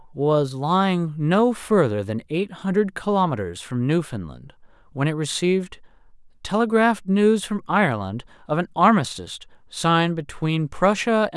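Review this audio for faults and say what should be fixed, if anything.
Nothing stood out on listening, so there is nothing here that needs fixing.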